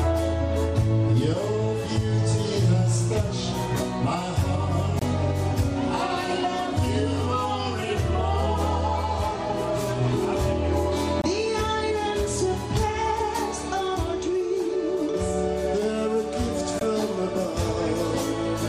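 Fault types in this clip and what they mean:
Block of digital silence: the audio path delivered zeros instead of samples three times, twice for about 23 ms, which fits an unfilled 1024-sample buffer, and once for about 18 ms, so the sound drops abruptly to nothing, leaving a short hole.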